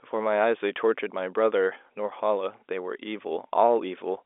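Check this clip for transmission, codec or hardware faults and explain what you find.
No faults can be heard: the speech sits within the ordinary G.711 A-law telephone band of about 300 Hz to 3.6 kHz, with nothing above 3.8 kHz, just as a normal fixed-line call would sound.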